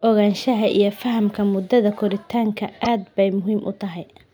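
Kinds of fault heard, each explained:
Repeated frames: about 26 ms of compressed audio, which fits one coded frame, is decoded a second time, so the speech briefly replays itself between "iyo fahamka muddada koritaanka" and "aad bay", at about 2.84 to 2.87 s. It is heard as a tiny stutter, and the clip grows 26.1 ms longer. A waveform shows the same short pattern twice in a row, and a spectrogram shows a duplicated slice.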